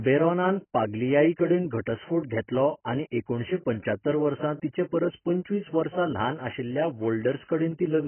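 Throughout, the speech stops at 3.1 kHz, and sibilants fizz and warble. Likely heavy AAC compression, at what sounds like about 12 kbps, forcing that low cut-off.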